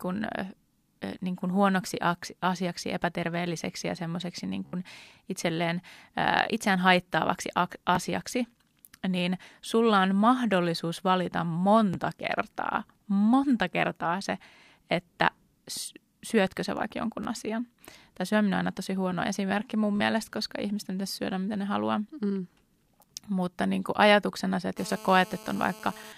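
Bluetooth stutter at 4.66 to 4.73 s, 7.95, 11.94, 17.24 to 17.27 and 19.96 to 20.00 s: lost packets make short slices repeat as a brief buzz, seen as repeated identical waveform blocks. From 24.78 to 26.13 s, GSM phone buzz from a nearby call adds a steady, raspy 217 Hz tone about 19 dB below the speech, drawn as evenly spaced horizontal harmonic lines.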